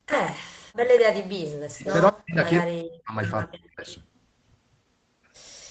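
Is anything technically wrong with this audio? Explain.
Yes, there are two problems, and they come and go through the first four seconds of this speech.

First, an echo leak at 0.1–0.32 s, 0.91–1.02 s, 1.86–2.08 s and 3.89–3.96 s. You hear a delayed copy of the talker trailing about 196 ms behind. It's strong at first, about 5 dB under the speech, then roughly 15 and 10 dB down, and barely there at the end. That's likely a far-end loudspeaker whose echo canceller let some of the pickup slip back into the call.

Second, speech suppressed in double talk at 1.62–1.86 s, 2.11–2.38 s, 2.61–3.16 s and 3.46–3.87 s. The talker's voice drops out in chunks, as much as about 40 dB down. The likely cause is that both sides were talking at once and the echo canceller couldn't tell the local voice from the loudspeaker echo, so it pushed everything down. The band-limited top end, with nothing above 8 kHz, is just the normal Opus call path.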